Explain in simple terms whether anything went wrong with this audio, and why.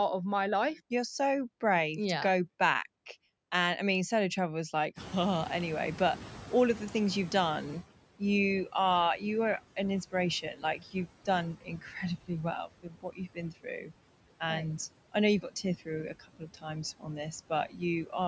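Noise suppressor artifacts run through the whole recording. The suppressor pushes the background noise down between words and lets it back up under them.

Noise suppressor catching up happens from 4.96 to 7.85 s. The room noise jumps up sharply at about 5 s. The suppressor's picture of the background was out of date, so the louder noise comes through with less reduction at first. It then sinks over nearly three seconds as the suppressor adjusts.

Speech cut by the noise suppressor happens at 10.1 to 12.0 s, 12.7 to 13.9 s, 15.1 to 15.9 s, 16.2 to 16.6 s and 17.5 to 18.1 s. Here the suppressor mistook quiet parts of the speech for background noise and turned them down. Brief stretches sound swallowed or faint, about half a second in each of the first two spots and shorter in the rest.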